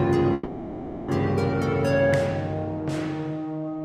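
At 0.33 s the sound stalls in a call audio freeze lasting until 1.10 s. The last moment of audio is stretched into a buzzy, hissing tail that gradually fades without reaching silence, and then the sound resumes where it left off, about 750 ms later than it should. This likely comes from delayed packets draining the jitter buffer. On a spectrogram the final spectrum smears into flat horizontal bands that dim, and the waveform shows a decaying, repetitive stretch.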